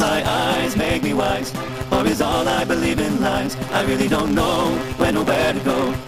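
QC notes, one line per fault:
Throughout: block size mismatch (truncated). A steady buzz at 138 Hz sits under the audio, and the material plays back 1.6 times faster than normal while staying at about its original pitch. One stage produces longer blocks than the next stage accepts, so the tail of every block is discarded. Each cut makes a small discontinuity, repeating at the block rate to form the buzz. The 1.6 ratio fits a 512-sample written block read as roughly 320 samples.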